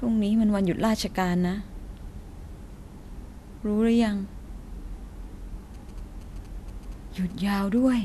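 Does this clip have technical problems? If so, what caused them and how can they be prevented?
Yes. GSM signalling bursts run from 5.74 s to 7.88 s: a galloping dit-dit-dit of short 217 Hz buzzes at roughly 25 dB below the speech. A 2G handset near the recording chain was sending short groups of radio bursts, as it does while negotiating with the network, and some unshielded stage in the audio path rectified those pulses into audible clicks repeating at 216.7 Hz. Keeping mobile phones well away from microphones, cables and interfaces, or switched to flight mode, prevents this.

GSM phone buzz follows directly, from 7.88 s to 8.00 s: a hard, raspy 217 Hz buzz with a dense stack of harmonics, about 29 dB below the speech and unrelated to it. Here a handset was in a call and was transmitting continuously at 216.7 bursts per second, so the rectified pulses became a steady tone instead of scattered groups. 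Shielded, balanced cabling and keeping active phones out of the room stop this interference.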